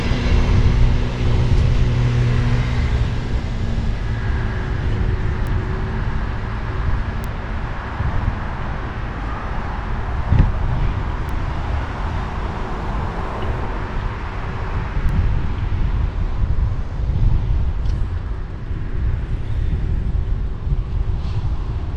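Four isolated ticks cut through the audio at 5.47, 7.24, 11.29 and 15.09 s. They are bit error spikes: a flipped bit in memory or on a digital link throws one sample (two at 15.09 s) off by a power of two before the signal snaps back. Peaks reach about −14, −8, −14 and −20 dBFS. Unlike crackle or a dropout, each tick is single, broadband, unrelated to the surrounding sound, and leaves no gap.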